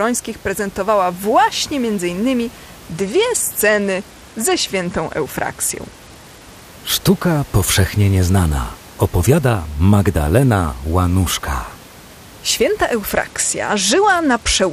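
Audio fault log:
2.86 to 6.64 s and 13.05 to 14.73 s, Bluetooth SBC bit pool drop. The speech suddenly loses its treble and turns dull. A gritty noise rides on it. Both spells sound alike. Each follows a congested wireless link. The sender cut the SBC bit pool to keep audio moving. The sound fits a fall from about 31 to 13, near 94 kbps. The top sub-bands then get few or no bits, and the rest are coarsely quantised. The second spell lasts to the end.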